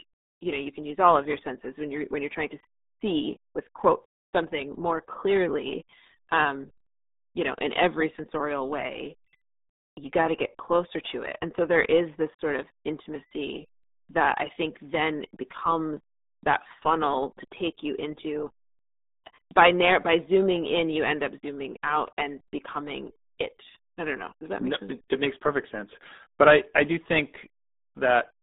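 RealAudio 14.4 codec damage runs throughout this speech clip: nothing passes above 3.8 kHz, leaving muffled, gargly speech that fits a heavily strained 8 kbit/s dial-up codec.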